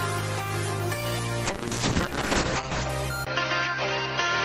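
From 1.5 s to about 2.95 s the sound turns coarse and muffled, losing everything above 8 kHz. This is a call bitrate drop: the encoder was cut from 32 to 7 kbps, staying at the bottom for about 1.3 s.

At 3.25 s a 20 ms gap is followed by duller sound with nothing above 6.2 kHz, a faint new noise floor well below the signal and little change in level, lasting to the end. The likely cause is an input switched to a poorer device.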